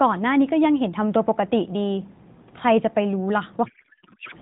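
From 3.66 to 4.36 s, a codec payload misread turns the narrowband AMR speech into garbled, warbling noise. The decoder unpacks octet-aligned frames as bandwidth-efficient ones, scrambling every field. Unlike packet loss, the sound never drops out; it keeps going as wrong sound.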